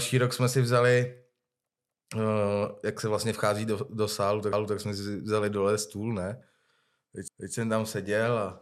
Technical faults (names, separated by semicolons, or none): overlapping chunks